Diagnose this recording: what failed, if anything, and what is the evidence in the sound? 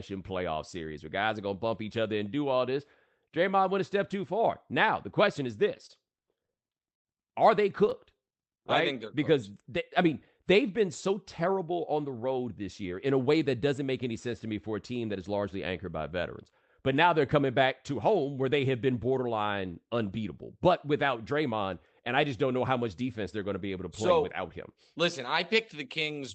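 Repeated stalls (stutter) in the network jitter buffer: 5.77–7.07 s has 13 gaps up to 100 ms, and 7.85–8.70 s has nine brief ones. Late packets emptied the buffer, and the receiver extended the last sound rather than dropping any.

Jitter buffer slow-down at 8.24–8.94 s: the audio plays at 94% speed with pitch unchanged, drawn out by 50 ms of repeated pitch periods, unlike a clock or tape slowdown, which lowers pitch.

Jitter buffer speed-up at 11.09–12.39 s: the audio runs at 107% and sounds hurried at the same pitch, as the receiver trimmed about a tenth of a second of pitch periods to shrink excess delay.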